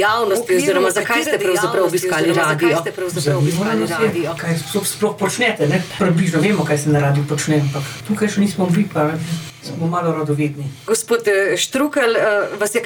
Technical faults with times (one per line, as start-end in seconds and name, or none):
0.00-4.42 doubled audio track